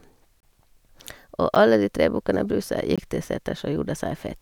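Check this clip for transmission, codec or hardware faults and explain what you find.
Three abrupt dropouts break the speech: a short hole from 0.40 to 0.43 s, a tick at 1.55 s, and another hole from 2.96 to 2.98 s. Each is a block of digital silence. Samples went to zero, likely because the output buffer wasn't filled in time, and the sound cuts out and back with no fade.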